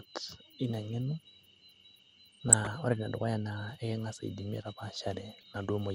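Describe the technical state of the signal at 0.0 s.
At 0.0 s the speech already carries the dull, gurgling, granular colouring that runs through the whole clip. Its likely cause is MP2 compression at a low rate, consistent with about 80 kbps. The Layer II coder divides the signal into 32 equal sub-bands and rations bits among them. Upper bands are switched off and flicker in and out, and the remaining bands are coarsely quantised. The damage is plainly audible.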